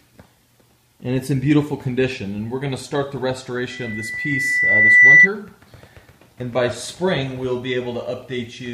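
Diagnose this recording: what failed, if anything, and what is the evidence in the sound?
Loudspeaker feedback squeal is the failure, and it sits in the analogue acoustic path, outside the digital chain. From 3.70 s a single steady tone at 2 kHz appears. It swells over about one and a half seconds and peaks at about 15 dB above the sound. It stops at 5.29 s. A microphone was hearing the loudspeaker it drives. At 2 kHz the loop gain passed one, so that frequency fed itself until the loop was broken.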